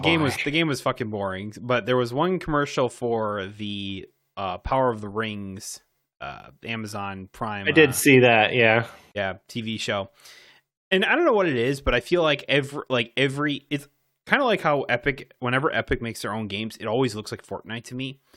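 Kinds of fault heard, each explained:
Clock slip clicks: Faint ticks recur at a steady rate of roughly one every 0.07 s, about 200 in all, running from 0.16 s to 18.34 s through the speech. They most likely come from two unsynchronised clocks drifting apart by around 300 parts per million, so a single sample is dropped or repeated each time the error adds up to one sample. Their strict regularity and tiny size set them apart from the irregular, longer gaps of packet loss.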